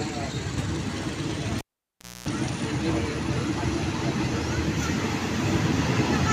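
At 1.58 s, cable pulled and plugged in: pop, 650 ms near silence, 60 Hz mains buzz, pop at 2.28 s; a dropout lacks buzz.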